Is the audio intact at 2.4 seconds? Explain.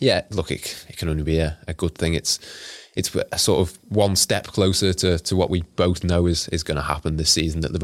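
Yes, the audio is intact at 2.4 seconds, with no dropout, glitch or other fault at that moment.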